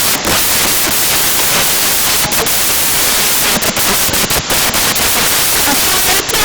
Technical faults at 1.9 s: samples built from the wrong bytes

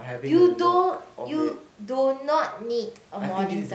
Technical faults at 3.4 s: none

